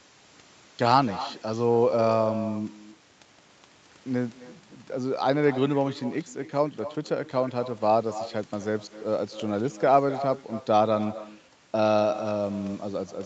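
Speech recorded from a call carries an echo with no canceller from start to finish: every phrase returns roughly a third of a second later, about 14 dB quieter and thinner. Unlike room reverberation, which smears straight off the end of each sound, this is a distinct delayed copy after a gap. That gap is the round trip of the far end's loudspeaker feeding its microphone, with nothing subtracting it, over audio that stops at 8 kHz.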